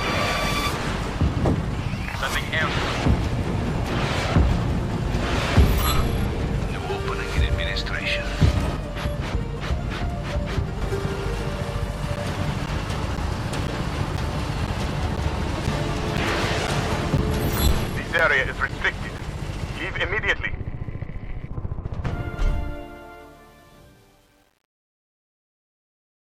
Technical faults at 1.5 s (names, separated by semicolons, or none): none